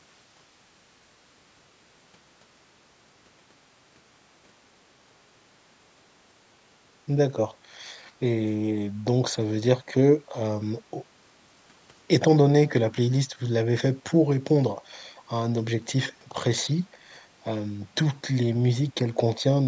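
From 7.99 to 8.12 s there is a brief echo leak: a faint copy of the speech, roughly 30 dB below it, trailing 338 ms behind. The likely cause is a loudspeaker-side echo canceller that let some microphone pickup through to be sent back.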